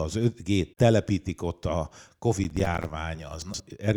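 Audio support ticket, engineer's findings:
Processor overload crackle, 2.44–2.90 s, right after "telepítik ott a". Gritty tearing over the speech: roughly twenty tiny silent dropouts in a row, which fits missed deadlines on buffers of around 5 ms. Probable component: overloaded audio processing thread.

Chunks out of order, 3.42–3.60 s. Brief jumbled stretch with three hard joins. A 60 ms chunk plays two chunks late, after material that should follow it; nothing is lost. Probable component: buffer write or queueing stage.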